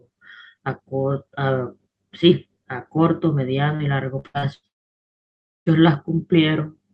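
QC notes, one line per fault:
3.75–3.82 s, short concealed packet loss: about 40 ms of audio never reached the decoder in time, so the receiver extended the preceding sound to cover the gap before blending back into the real signal. It is heard as a brief smear or wobble.
4.19–4.66 s, repeated packet loss (robotic sound): four separate gaps, the longest 85 ms, together cover about half of this span. Each gap is patched by continuing the last sound, so the passage turns choppy, with fragments missing.
4.67–5.69 s, long network dropout: roughly a second of audio is absent. The last sound is briefly stretched into a fading buzz, then near-silence follows until the signal resumes, with that stretch lost. The likely cause is a network outage during the call.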